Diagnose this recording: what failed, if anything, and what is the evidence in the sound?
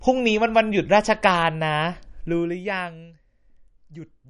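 The codec stage has failed: MP3 compression damage is plainly audible throughout the speech, with nothing above 10.5 kHz and a watery, swirly texture on sibilants. On a spectrogram there is a flat ceiling at 10.5 kHz and speckled holes below it, where weak frequency lines drop in and out between frames, likely from a bitrate near 40 kbps.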